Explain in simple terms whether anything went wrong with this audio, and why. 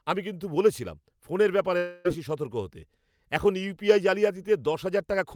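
From 1.77 to 2.07 s, right after "কিন্তু বলেছিলাম ফোনের ব্যাপারে", the speech turns into a fading buzz or hiss and resumes at "বেশি সতর্ক হতে এখন" with about 0.3 s missing. This is likely a long network dropout. Unlike a brief glitch, a whole stretch is lost, not a single tick.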